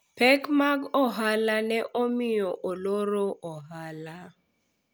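No technical faults can be heard anywhere in the recording; the signal stays steady and intact throughout.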